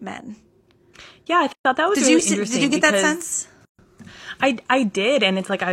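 At 1.53 s, just before "that was", the speech drops out for 123 ms, and at 3.65 s, after "you get that sense", for 136 ms. Each is a gap at a join of encoded pieces. Separately encoded segments kept their encoder delay and end padding, leaving abrupt silences with smeared edges.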